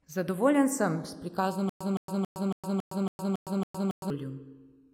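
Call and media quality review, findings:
Channels drifting apart, whole clip: slow flanging when summed to mono. Separate device clocks, around 150 ppm apart, let inter-channel delay creep to under a millisecond, sweeping comb notches.

Stutter with silent gaps, 1.69–4.10 s: 165 ms fragment repeats 8 times, 112 ms digital silence between, 277 ms period. Likely player or stream stall replaying last buffer; intervening speech lost.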